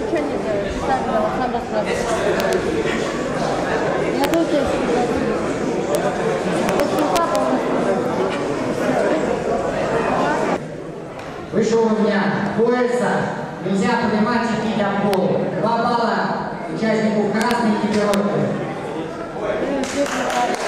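Integer overflow at 2.40–2.53, 4.24–4.34, 5.95, 6.69–7.35, 15.14, 17.42–17.51 and 18.14 s. Peaks exceed the integer range by at most about 1 dB and wrap to the opposite sign instead of being limited, producing sharp cracks.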